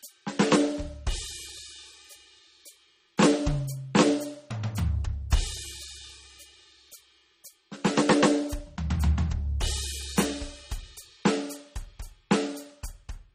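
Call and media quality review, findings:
Music, throughout: nothing above 15.2 kHz. First-encoding artefacts remain. Likely low-bitrate audio saved at a high bitrate. The sound points to an MP3 near 32 kbit/s, re-encoded around 256 kbit/s. The second pass adds size, not lost detail.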